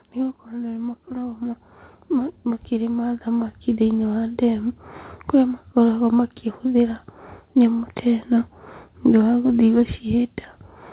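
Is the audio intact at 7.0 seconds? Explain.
Yes, the speech at 7.0 seconds is intact, with no dropout, glitch or other fault, only the steady lack of anything above 4 kHz that comes with a narrowband call path and fits a G.711 mu-law codec at 64 kbps.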